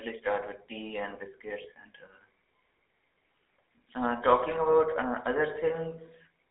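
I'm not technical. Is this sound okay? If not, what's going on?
No. GSM full-rate codec, throughout: the old mobile-phone coding rebuilds the voice from coarse pulses and keeps only about 300 Hz to 3.6 kHz, so it sounds buzzy, gravelly and thin.

Lost GSM frames, 1.62 to 1.66 s: one chunk of speech went missing, and the phone repeated the previous chunk, which gives a brief rough, metallic ring.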